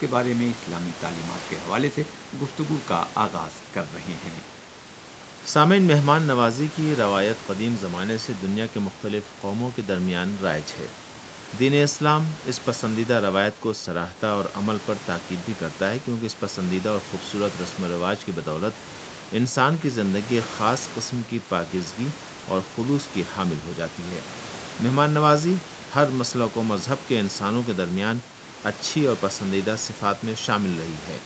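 Nothing's wrong here, just speech that's come through a call, with the top end stopping around 8 kHz as the call path does and a bit of room noise sitting about 18 dB under the speech.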